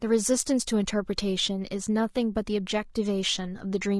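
From start to end, the speech sounds rough and grainy. Noise fills the gaps between harmonics, and the top band sounds thin and synthetic. This is likely low-delay AAC compression, AAC-ELD, whose short frames blur pitch detail. The damage fits a bitrate near 32 kbps.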